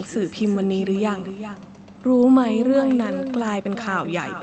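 From the first syllable to the end, the speech carries echo with no canceller: the far end is playing the call over a loudspeaker, its mic is catching it, and nothing strips it out. So every phrase comes back roughly 400 ms later, about 10 dB down, sounding thinner than the original. The top end stops near 8 kHz, which fits a wideband call codec setting.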